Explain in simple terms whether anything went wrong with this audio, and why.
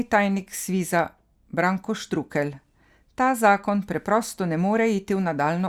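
Nothing went wrong with this audio; there are no faults to explain.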